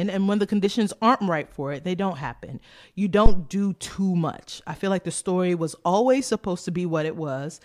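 A supply switching on a live input sent a step through the coupling capacitors at 3.26 s, producing a phantom power thump: a deep bump peaking near about -2 dBFS, decaying within 39 ms, ending by 3.44 s.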